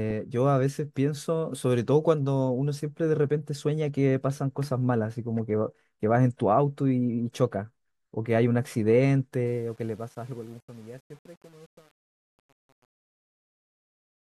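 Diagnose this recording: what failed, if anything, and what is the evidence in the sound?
Truncation distortion at sample-format conversion: the fade-out turns gritty from 9.46 s and is worst from 9.86 s, fitting undithered 8-bit steps. The waveform shows stair-steps; the spectrogram shows broadband hash.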